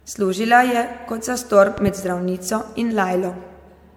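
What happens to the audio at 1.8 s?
A loud pop strikes between 1.78 and 1.90 s, just after "kot zastor" and before "zdravnico in". Two sharp pops arrive in quick succession, peaking about 5 dB above the speech. This is likely a voltage step or static discharge, shaped by the circuits that follow it. Unlike a dropout or a splice click, nothing is removed: the speech carries on underneath, and the pops are simply added on top.

Under the pops, as across the whole clip, generation loss colours the speech. It sounds swirly, smeared and hollow, with blurred attacks and nothing above 17.7 kHz. The likely cause is MP3 at 96 kbit/s decoded and re-encoded about four times, each pass quantising on a shifted frame grid. That is what sets it apart from a single low-bitrate encode: the damage is worse than 96 kbit/s alone would produce.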